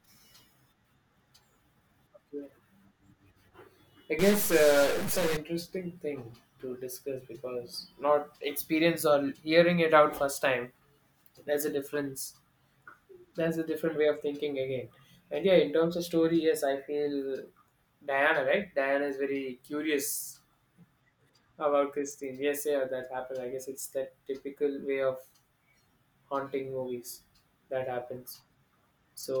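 From 4.19 to 5.37 s a stuck bit, likely a jammed data line, adds harsh buzz around -30 dBFS; unlike clipping, it fills pauses too.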